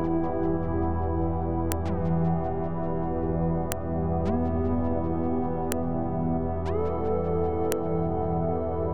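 Sharp clicks at 1.72, 3.72, 5.72 and 7.72 s, every 2.0 s, are file header played as audio, where joined pieces kept their headers. Each click shows as a waveform spike and a thin broadband vertical line.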